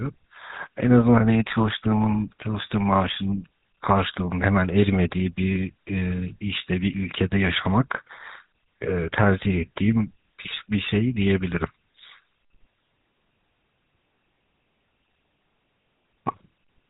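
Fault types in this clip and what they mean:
GSM full-rate codec: The speech runs through the old GSM full-rate coder for its whole length. This coder models the throat and mouth as a filter. It drives that filter with evenly spaced pulses, keeping only a third of the excitation. Nothing above 4 kHz survives, so the top end is gone. The damage is plainly audible as a buzzy, gravelly roughness on the voice. The sound fits the 13 kbps full-rate mode.
lost GSM frames: Near the end, from 15.82 to 15.86 s, the decoder loses its input for about 40 ms. That fits two 20 ms frames going missing. The decoder does not fall silent. It repeats the settings from the last good frame. The gap is filled with a short, rough, metallic ring instead of real speech. This loss is brief, so it never fades fully to silence.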